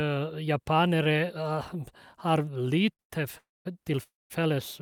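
From 2.93 to 3.01 s and again from 3.01 to 3.12 s, the speech hangs on one sound, held with a faint buzz for 56 ms and then 89 ms: a short stall from a late packet, the jitter buffer stretching audio until the packet arrived.

At 3.38 to 3.67 s and 4.03 to 4.32 s, a sound trails off into a fading buzz and then about 210 ms and 190 ms of silence before speech resumes where it stopped, a call audio freeze likely caused by delayed packets emptying the jitter buffer.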